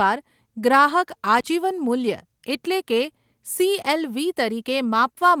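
At 1.38 s there's an intermittent contact, the kind you get when a cable or plug loosens for a split second. The audio drops out for about 33 ms inside a window running to 1.44 s, and you can hear crackle on either side of the break where the connection chatters open and shut. In the gap itself there's just faint hiss instead of the signal.

Then around 4.01 to 4.03 s there's a lost packet rebuilt from error correction. There's no actual hole in the speech, because the following packet carried a lower-bitrate backup copy and the decoder played that instead. The patch sounds like a single 20 ms frame, and it comes across a touch rougher and noisier than what surrounds it, a brief grainy blip rather than a dropout.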